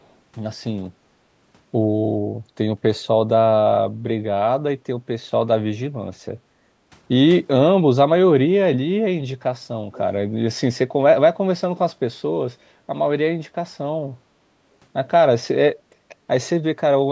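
From 0.02 to 0.14 s, a faint delayed copy of the speech surfaces very far below the main signal and lags it by about 436 ms. This is an echo leak. The likely cause is a far-end loudspeaker whose output reached that side's microphone, with the echo canceller failing to subtract all of it, so the residue was sent back down the line. It is a short scrap rather than a sustained double.

From 6.39 to 6.9 s, the background is gated by the echo canceller. While the loudspeaker played, the canceller pulled the microphone gain down hard, and the room sound sinks by up to about 15 dB for roughly half a second before recovering. It is heard as a brief hole in the ambience.

At 9.92 to 10.0 s, the echo leak returns with the same 436 ms lag, this time much stronger, around 20 dB below the speech. At that level the 80 ms fragment is a repeat trailing the original, another residue that slipped past the canceller. 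The call microphone processing's band limit, with nothing above 8 kHz, keeps both echoes confined to the same narrowed range as the speech.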